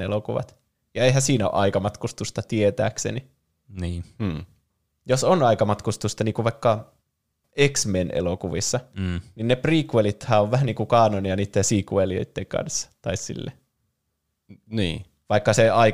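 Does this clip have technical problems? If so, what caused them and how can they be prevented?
No, nothing technical goes wrong anywhere in this speech recording, so there's nothing here that needs preventing.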